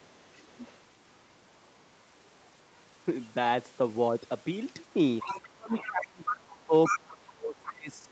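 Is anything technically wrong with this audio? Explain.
Yes, the recording has two kinds of fault, both pointing to acoustic echo handling on a speakerphone-style call.

Other side's voice leaking through: a second talker is audible from 0.0 to 2.8 s very faintly, about 35 dB under the main speech, then from 5.19 to 5.9 s at about 10 dB under, and from 6.25 to 7.56 s at nearly equal level, about 5 dB under. This is likely residual loudspeaker echo that the canceller failed to subtract from the microphone.

Speech suppressed in double talk: between 5.4 and 7.94 s, while the leaked voice overlaps, the main talker dips, by as much as about 30 dB, for roughly two seconds in total. The likely cause is the echo suppressor attenuating everything when it cannot separate near speech from echo.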